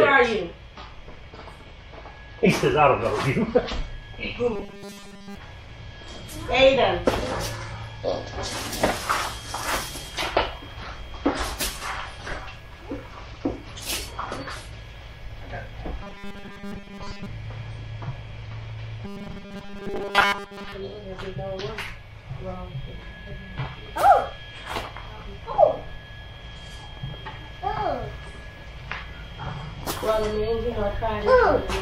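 Robotic sound from repeated short buffers occurs at 4.53–5.36 s, 16.03–17.26 s and 19.05–20.72 s. Each stretch turns into a rigid, metallic 200 Hz buzz. The first is wholly repeated, the later two mostly. A starved buffer likely loops about 5 ms of audio.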